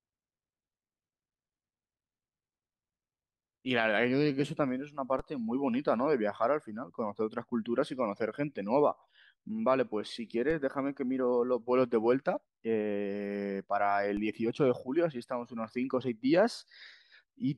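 Speech with three DC steps at 5.19, 10.51 and 14.17 s. The zero line jumps by about -31 to -32 dBFS, giving low thumps as a 20 Hz high-pass drains each offset away.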